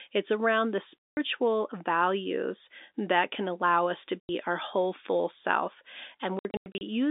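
Packet loss filled with silence cuts this telephone-band speech at 1.01–1.17 s, 4.22–4.29 s and in scattered gaps over 6.39–6.81 s. Missing packets were replaced by hard-edged silence in steps that fit 30 ms packets, over G.711 coding limited to roughly 250 Hz–3.7 kHz.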